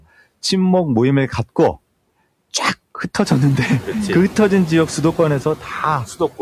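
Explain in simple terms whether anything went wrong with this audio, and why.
Noise suppressor artifacts run through the whole clip. A noise-reduction step keeps judging which parts of the sound are steady background hiss and turns those down sharply, so the background drops away in pauses and returns under speech, even after the room noise gets louder around 3 seconds.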